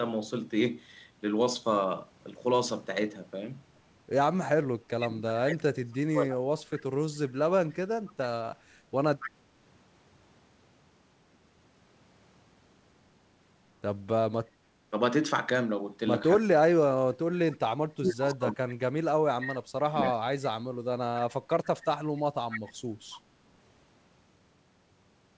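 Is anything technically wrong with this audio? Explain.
Yes, there are two separate problems, both from the echo canceller on a speakerphone call. The band tops out around 8 kHz, which fits a wideband G.722 call at 64 kbps.

Speech suppressed in double talk shows up from 4.95 to 6.59 s and again from 16.39 to 20.27 s. The speech drops away in chunks, by as much as about 35 dB at the deepest, for roughly a second and a half the first time and around three seconds the second. The likely cause is the canceller hearing both sides at once, failing to tell the talker from the loudspeaker echo, and ducking everything.

Echo leak is a delayed copy of the speech, trailing about 277 ms behind. It turns up at 7.69 to 8.13 s, 9.2 to 9.3 s, 20.04 to 20.1 s and 22.16 to 23.18 s. The first is very quiet, about 30 dB under the speech, while the later ones are louder, roughly 10 to 15 dB down. It's likely the far end's canceller letting part of its microphone pickup slip back into the call.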